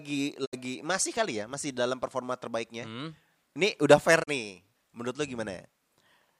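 At 0.44 s the speech cuts out in a digital broadcast dropout. It fades to silence over about 20 ms, stays silent, and returns at 0.55 s just before "masih kali ya masih". The missing stretch is about 64 ms, which fits two lost frames. A second dropout follows right after "hmm ini udah fair", from 4.22 to 4.29 s. It has the same quick fade and about 32 ms lost, which fits one frame. Each time the receiver muted because good frames stopped arriving, so that audio is gone.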